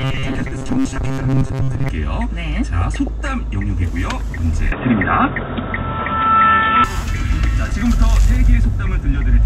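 The clip is a recording of everyday sounds with three separate faults. From 0.01 to 1.89 s it has robotic sound from repeated short buffers. A steady, metallic buzz at 134 Hz sits over everything, which fits a buffer of roughly 7.5 ms being replayed again and again while most of the real audio is skipped. The likely cause is audio arriving too slowly for playback. Ordinary packet-loss glitches come and go, but this buzz holds one fixed pitch whatever the source is doing. From 2.81 to 3.21 s there is DAB burbling, a short patch of bubbling, squelchy chirps where individual frequency bands jump up or down in level. This comes from bit errors at a small fraction of a percent getting past the error correction into the MP2 data. Low-bitrate codec swirl is steady and spread across the whole sound, while this is a brief, localised burst with sub-band level jumps that come and go frame by frame. 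From 4.72 to 6.84 s the input is switched to a poorer device. With no gap at either change, the top end disappears and the sound turns dull and boxy. A faint new noise floor appears far below the signal, and the loudness barely changes. The likely cause is the system moving to another microphone or a headset call profile and back. A plain low-pass filter would not bring a different noise floor and tone that arrive and leave abruptly together.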